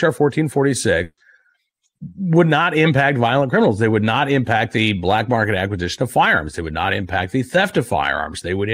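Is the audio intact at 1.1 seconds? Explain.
No. At 1.1 seconds the speech is inside a burst of packet loss running from 1.03 to 1.19 s. A run of packets never arrived in time, so about 140 ms of speech is missing. The receiver filled the hole by extending the last sound it had and turning it down as the gap went on. The result is that last sound held and fading, then dropping to silence for about 50 ms. The speech then resumes further along, with that stretch skipped.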